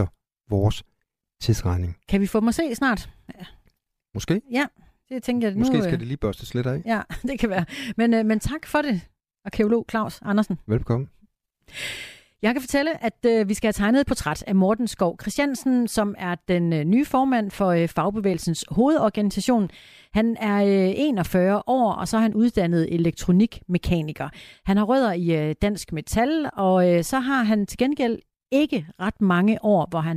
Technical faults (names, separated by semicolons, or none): none